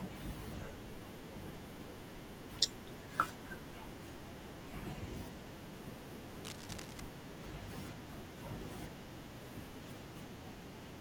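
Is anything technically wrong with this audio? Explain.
Yes: from 6.44 to 7.00 s there's cable scratch noise, gritty rustling bursts just under the speech level, likely from a worn connector or lead being moved.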